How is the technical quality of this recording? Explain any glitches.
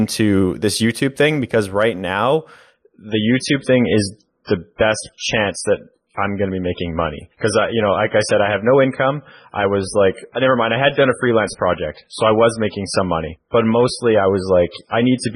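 The quality drops sharply partway through. From 2.74 s, just after "thing because right now", to the end, an adaptive stream at a lower bitrate takes over: the player switched to a much leaner encoding, consistent with a fall from around 128 to 16 kbit/s MP3. With that step down, nothing above 10.5 kHz survives, so the speech turns dull and smeared with codec artefacts, changing abruptly without any gap.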